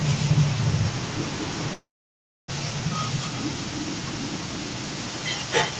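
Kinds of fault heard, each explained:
Echo leak, throughout (0.00 to 5.80 s): a second copy of the speech trails the original by about 352 ms and sits only a few dB below it. This is most likely the far end playing the call on a loudspeaker while its echo canceller fails to remove what its microphone picks up, so that residue is sent back and rides along under the live speech.
Long network dropout, 1.73 to 2.52 s: for about 0.77 s the speech stops being delivered. The receiver briefly continues the last sound as a fading buzz, then roughly 0.64 s of near-silence follows, and the speech resumes with about 0.6 s of it simply gone. This is likely a burst of lost packets, and the jitter buffer's timing shifts by roughly 150 ms as playback recovers afterwards.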